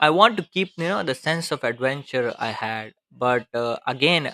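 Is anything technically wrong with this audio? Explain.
Yes. At 2.6 s the speech has compressed frames skipped: about three 21.3 ms frames, roughly 70 ms of audio, never reach the output, so the speech jumps ahead. Unlike a dropout, nothing goes silent.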